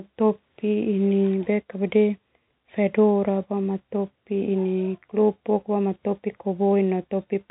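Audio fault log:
No fault to log in this speech audio.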